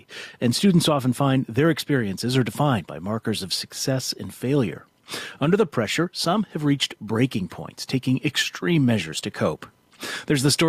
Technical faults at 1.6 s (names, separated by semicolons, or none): gain pumping; clock drift between sender and receiver; repeated timing corrections